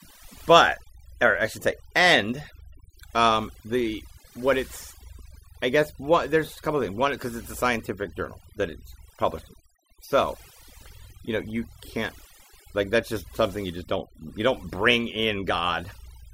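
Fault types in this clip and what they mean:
overdone noise removal: Across the whole speech clip the background drops and breaks up into twinkling, chirpy specks. A noise reduction stage set too strong is pulling individual frequency bands down whenever they sit near its noise estimate, taking quieter parts of the voice with them.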